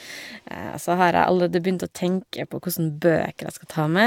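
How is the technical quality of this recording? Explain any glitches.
The recording has one fault, and it runs through the whole clip. That fault is generation loss. The speech sounds swirly and hollow, with smeared consonant attacks. Nothing is heard above 17 kHz. The likely cause is repeated lossy coding, with the audio decoded and re-encoded about three times. The character fits AAC-LC at around 96 kbit/s. Each pass quantised on a shifted frame grid. The noise and spectral gaps stacked up, sounding worse than one encode would.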